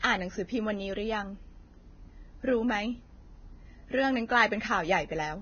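From start to end, the speech carries heavy damage from lossy coding, likely Vorbis compression at a low setting, which fits a bitrate near 18 kbps. Nothing is left above 6.5 kHz, so the top of the spectrum is simply gone. The treble that remains has been quantised so coarsely that fine detail turns into hiss-like noise. Sibilants sound grainy and rough. Consonant onsets are smeared rather than crisp.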